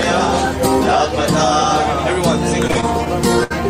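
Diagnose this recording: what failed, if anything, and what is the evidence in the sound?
The network delivery failed, and the jitter buffer shows it as repeated stalls (stutter). Between 2.67 and 3.08 s the sound catches four times. The receiver holds the last sound to bridge each gap, so 83 ms is filled in all, the longest hold being 37 ms. About a fifth of that stretch is concealed. Packets arrived late or slower than playback, so the buffer kept draining. Nothing is lost, but the sound drags and stumbles.

A second network fault follows soon after: a short stall from a late packet. At 3.44 to 3.52 s one sound is held too long, with a faint buzzy, flattened quality. The packet was not ready when due, so the buffer emptied. The receiver stretched the last sound for 67 ms, matching a 67 ms jump in delay. Playback then resumed from the same point, so nothing is missing.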